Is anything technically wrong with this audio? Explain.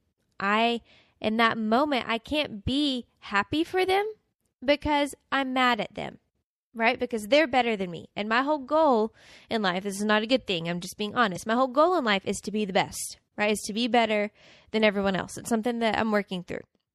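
Yes. Throughout the speech there is plainly audible watery, swirly smearing, with the top end dulled and s sounds chirping metallically. This is likely MP3 compression at a bitrate consistent with about 64 kbps, starving quieter frequency lines so they flicker frame to frame and cutting treble.

From 11.33 to 11.37 s, right after "thing I'm just being", a short glitch breaks through. This is damaged data in the compressed stream: the decoder misreads corrupted frames, loses sync and skips ahead to the next valid frame.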